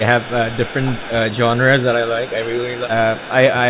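From 0.18 to 1.15 s a faint delayed copy of the speech trails the talker by 275 ms, roughly 20 dB down. This is an echo leak, likely from a far-end loudspeaker whose echo canceller let part of the pickup through. On a spectrogram it shows as a weak second set of harmonic stripes shifted 275 ms to the right of the main ones. In the waveform it adds low-level ripple in the gaps between syllables. The same echo returns, slightly weaker, from 1.59 to 1.85 s. It comes back at about the first level from 2.29 to 2.89 s and fainter again from 3.15 to 3.31 s.

Overlapping this, speech suppressed in double talk pulls the talker down in short bursts. The likely cause is a canceller that could not tell its own talker from the echo and attenuated both. The dips come at 0.45–0.57 s (around 10 dB), 1.1–1.23 s (around 15 dB, the deepest) and 1.94–2.56 s (a milder 5 dB or so). Each appears as a sudden notch in the waveform envelope and a fading band of energy on the spectrogram. 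All of this sits within a telephone band with nothing above 4 kHz.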